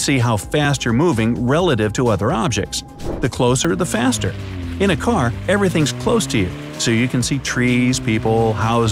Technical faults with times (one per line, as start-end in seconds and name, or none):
0.65 dropped buffer (overrun)
3.65 dropped buffer (overrun)